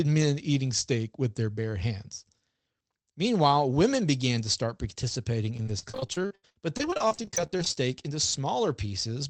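From about 5.57 s to 7.83 s the speech breaks up with repeated packet loss, giving that robotic sound. Over those two and a quarter seconds there are 39 separate dropouts, the longest around 83 ms, and each one gets papered over by stretching the last bit of audio. Roughly a third of the stretch is filled-in sound, so it comes out choppy with pieces missing. The audio's band-limited, call-codec character fits something like Opus at 24 kbps.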